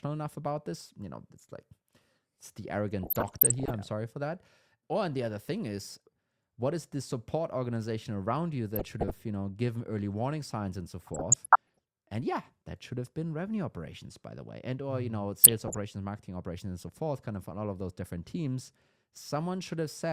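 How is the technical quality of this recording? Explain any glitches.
The recording has four bursts of DAB burbling. They occur at 3.03–3.70 s, at 8.76–9.17 s between "support organization around you" and "you know given early", at 11.00–11.78 s after "warning signs and so", and at 15.44–15.77 s just before "marketing operations and so". Weak reception let bit errors slip past error correction into the MP2 data. The errors corrupted sub-band samples and put short blips of noise into the audio. The first burst points to the highest error rate, under 1 percent, while the others are lower.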